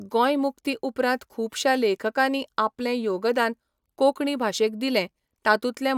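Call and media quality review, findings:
Call and media quality review: nothing to report for this speech clip.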